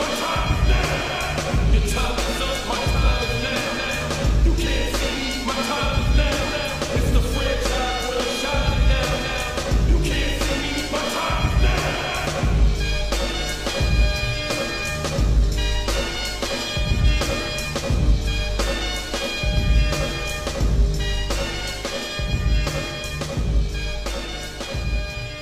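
Damaged data in a compressed stream corrupts frames, so the decoder misreads them and loses sync until it finds the next frame header. Each break is a brief blip or squawk of about 40 to 50 ms, at 2.00–2.05, 6.64–6.69, 12.22–12.27, 17.00–17.05 and 19.23–19.27 s.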